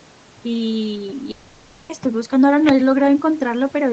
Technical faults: overdone noise removal; long network dropout

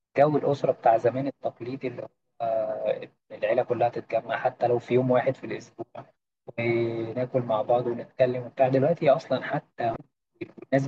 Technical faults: damaged data in a compressed stream

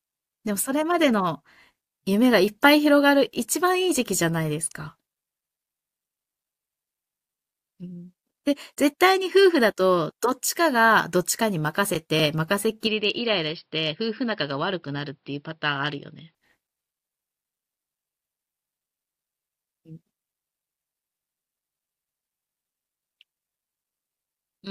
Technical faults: input switched to a poorer device

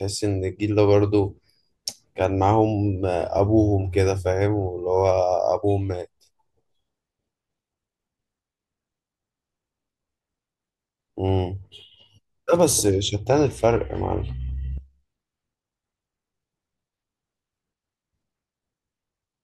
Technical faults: block of digital silence

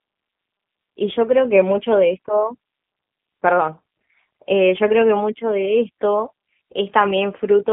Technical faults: G.729 codec

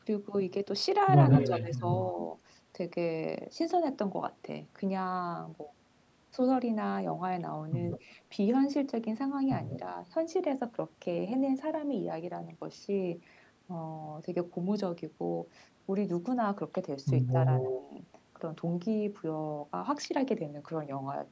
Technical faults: echo leak; speech suppressed in double talk

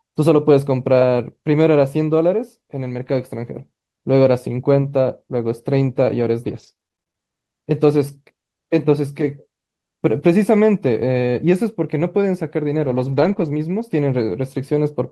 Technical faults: repeated packet loss (robotic sound); lost packet rebuilt from error correction

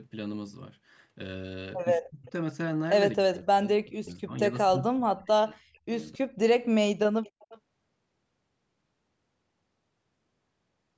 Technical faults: speech suppressed in double talk; echo leak

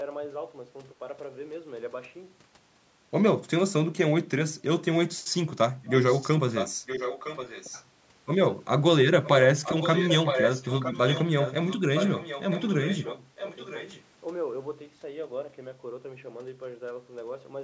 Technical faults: speech suppressed in double talk; echo leak

